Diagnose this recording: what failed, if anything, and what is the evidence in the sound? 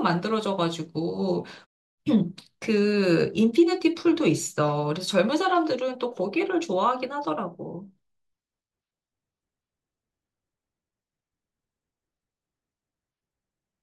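Nothing in the signal chain has failed: the speech comes through intact and continuous, with the background falling quiet in the pauses and returning ahead of each phrase, as noise-muting processing does when it is working as intended.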